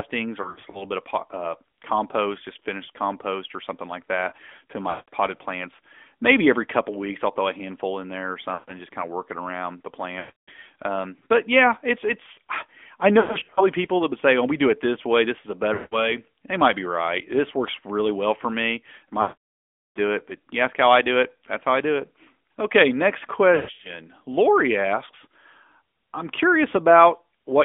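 AMR narrowband mobile codec runs throughout: the speech is squeezed into a telephone band of roughly 250 Hz to 3.5 kHz, with plainly audible buzzy, synthetic coding damage that fits a rate of about 10.2 kbps. Lost AMR speech frames then break up the sound eight times. At 0.42–0.85 s, just before "bit of uh compost", about 140 ms of scattered losses cause brief dips and warbles. At 4.90–5.13 s, after "something like that to", there is a drawn-out smear. Further dropouts follow at 8.54–8.72 s and 10.20–10.50 s. At 13.20–13.66 s, between "yeah it's it's I" and "people that would say", there are scattered dips and warbles. Another dropout comes at 15.74–16.17 s. The worst is at 19.22–19.99 s, where the decoder repeats its last pitch and vocal-tract settings while the level falls, so the sound stretches and fades to silence before returning weak or rough. The last is at 23.56–23.93 s.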